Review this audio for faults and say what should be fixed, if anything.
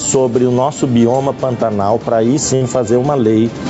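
Gain pumping runs throughout: the gain is pulled down by roughly 15 dB under each loud sound, likely from input gain set too high driving a fast limiter. Reduce the microphone gain so the limiter seldom engages.

A burst of packet loss occurs from 2.55 to 2.64 s. The last sound is held and faded for about 50 ms, then playback resumes with about 60 ms missing. Enable Opus in-band FEC or improve network stability to reduce burst losses.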